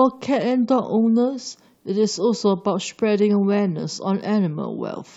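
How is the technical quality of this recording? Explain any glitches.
Listening closely to the recording, nothing stood out as a technical problem or glitch.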